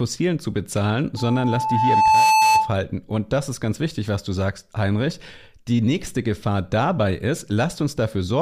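A loop formed between microphone and loudspeaker, with gain above one at 875 Hz. Right after "zu bezahlen", from 1.17 to 2.76 s, a loudspeaker feedback squeal swells over roughly a second into a steady tone sitting a little above the speech.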